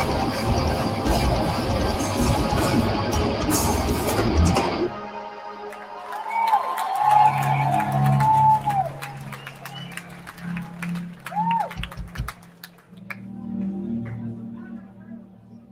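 Throughout, onsets come through while sustained parts and decays sink, the level swinging by around 10 dB. This is a noise suppressor applied to music or sounds: a suppressor tuned for speech treats steady, held material as noise and pulls it down.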